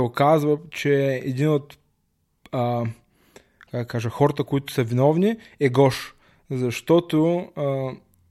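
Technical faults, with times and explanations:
0.13 to 8.28 s, clock slip clicks: a fast, faint rattle of tiny ticks runs under the speech for nearly the whole clip, repeating roughly every 30 ms, about 200 in all, and dropping out wherever the speech pauses into silence. Each tick is a single sample dropped or repeated, likely because two devices are running on unsynchronised clocks that differ by roughly 700 ppm, so a full sample of error builds up many times a second.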